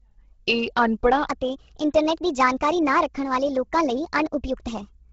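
From the start the speech has a breathy, grainy edge, with hiss in place of detail up top and nothing above 7.8 kHz. This is likely heavy Bluetooth LC3 compression, which at a rate pointing to about 16 kbps fills the upper spectrum with noise.

At 1.27 s the speech abruptly turns higher and hurried, roughly five semitones up, and stays that way to the end. It is likely a section at the wrong speed, played 1.32 times too fast, so pitch and tempo rose together.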